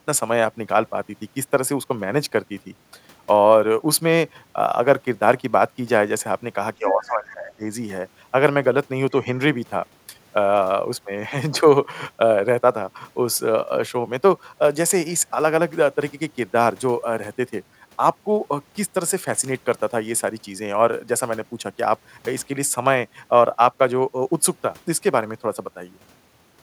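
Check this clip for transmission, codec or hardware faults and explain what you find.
One fault stands out: speech suppressed in double talk, from 6.78 to 7.63 s. The speech dips by roughly 20 dB and breaks up for most of that stretch. The likely cause is an echo canceller treating simultaneous far-end talk as echo and attenuating both. Unlike packet-loss dropouts, the level ducks in pieces rather than cutting to silence abruptly.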